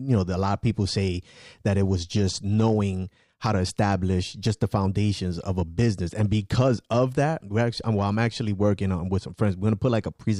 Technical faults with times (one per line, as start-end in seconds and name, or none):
none